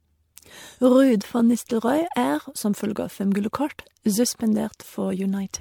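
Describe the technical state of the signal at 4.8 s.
At 4.8 s the speech carries generation loss, present across the entire clip rather than at that moment alone. It sounds swirly, smeared and hollow, with consonant attacks blurred. The likely cause is repeated lossy re-encoding: each decode-and-encode pass requantises on a shifted frame grid, so noise and spectral gaps accumulate. The character points to around seven MP3 passes at roughly 96 kbit/s, with bandwidth still extending to about 20.1 kHz.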